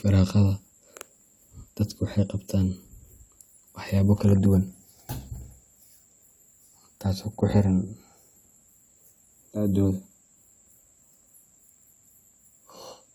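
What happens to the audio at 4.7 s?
Nothing goes wrong at 4.7 s: the speech there plays through intact, with no dropout, click, distortion or other audible fault.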